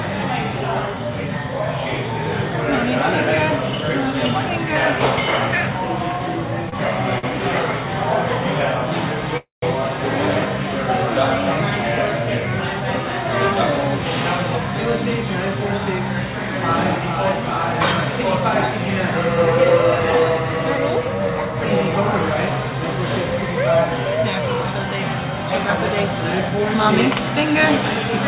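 Short stalls from a late packet occur at 6.69 to 6.74 s and 7.18 to 7.25 s in this audio, which comes through a call path with nothing above 4 kHz, consistent with G.711 A-law at 64 kbps. Each time, a packet missed its slot, the jitter buffer emptied, and the receiver held the last sound for 31 ms and then 49 ms, leaving a brief drawn-out buzz or dip before resuming where it left off. A call audio freeze follows at 9.37 to 9.64 s. The sound stretches into a fading buzz or hiss and then about 160 ms of silence, a 252 ms gap inserted before the audio picks up unbroken. The likely cause is packets delayed in transit that drained the jitter buffer.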